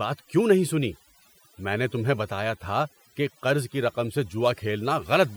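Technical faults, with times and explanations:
Throughout: overdone noise removal. The noise reduction was set too strong, so frequency bands near the estimated noise floor are pulled far down or cut entirely, taking the quieter parts of the speech with them. Pauses fall to near silence with twinkling specks.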